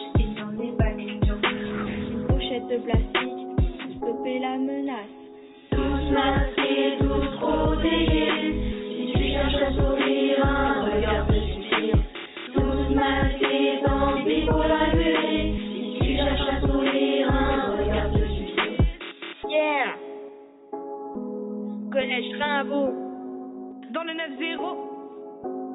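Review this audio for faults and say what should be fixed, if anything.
Nothing needs fixing: the signal holds steady throughout, with no audible disruption to its level, timing or continuity.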